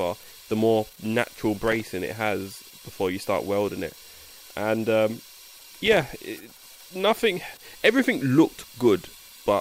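The processor twice falls behind on its audio buffers, producing processor overload crackle from 1.59 to 1.82 s and again, longer, from 5.52 to 6.03 s. Each missed deadline drops a tiny slice of silence with hard edges into the sound. The density of these dropouts points to buffers of around 1.5 ms, with roughly ten missed in the first burst and about thirty in the second. Heard together, they form a gritty, tearing crackle that stops once the load eases.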